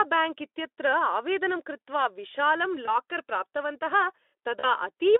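VoIP packet loss concealed by the speech codec at 2.85–2.91 s and 4.59–4.65 s: the decoder extrapolates across the gaps, briefly smearing the sound into a fading buzz or coloured noise.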